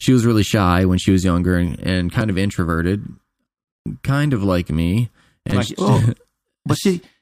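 At about 5.50 s there's a repeated buffer: fresh audio didn't show up in time, so the same roughly 5.8 ms slice got played three extra times, which fits a 256-sample buffer. It comes across as a quick buzzy click, with essentially nothing lost.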